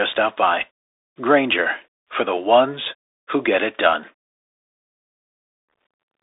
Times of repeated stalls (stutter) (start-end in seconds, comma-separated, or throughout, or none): none